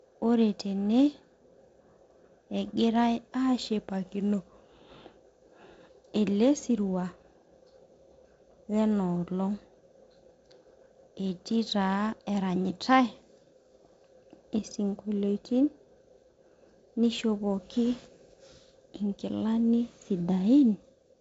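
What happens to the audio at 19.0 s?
At 19.0 s the audio is intact, with nothing there beyond the light hiss and the roll-off near 7.7 kHz of the G.722 wideband telephone coding at 48 kbit/s that runs through the whole clip.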